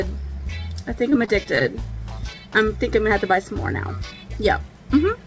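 From 1.10 s to 1.67 s there's a stretch of repeated packet loss, and it gives the sound that choppy quality. You can hear six short dropouts packed into barely half a second, none longer than about 19 ms. Each one gets papered over by stretching the previous bit of sound, so roughly a sixth of that span is concealment rather than real audio. The call path's G.722 coding leaves nothing above 8 kHz.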